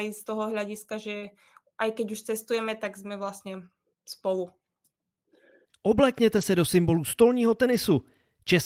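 Speech with two kinds of packet-loss fault. Right after "toho hľadiska že", a short concealed packet loss at 1.17–1.23 s smears about 40 ms by extending the previous sound, visible as a stretched, blurred patch on a spectrogram. Lost packets rebuilt from error correction follow at 1.21–1.27 s, 4.45–4.47 s, 6.37–6.43 s (just before "se do symbolu stolního") and 7.67–7.77 s. These low-bitrate copies sound rougher and noisier, and show as grainy, less defined stretches with no waveform gap.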